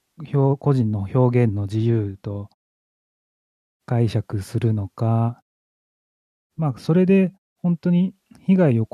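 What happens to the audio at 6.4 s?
Nothing goes wrong at 6.4 s; the speech there is intact, with no dropout, glitch or distortion.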